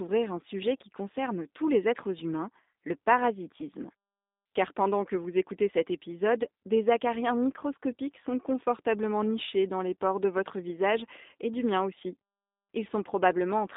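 From start to finish the speech carries G.729 codec damage, the low-rate VoIP coding that fits an 8 kbit/s G.729A stream. The voice is rebuilt from a vocal tract filter, a pitch predictor and a few pulses per 10 ms frame, so it sounds slightly rough and synthetic, and that damage is plainly audible. The band runs from 200 Hz to 3.7 kHz, and a spectrogram shows a hard ceiling with nothing above 3.8 kHz.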